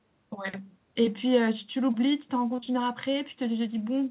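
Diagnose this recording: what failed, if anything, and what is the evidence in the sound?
Network stage, short concealed packet loss: two back-to-back gaps at 2.56 to 2.60 s and 2.60 to 2.64 s. The decoder extended the preceding sound across both, leaving a brief smear.

A short stall from a late packet follows at 2.64 to 2.69 s. The jitter buffer emptied, so the sound was held 27 ms too long, with nothing lost.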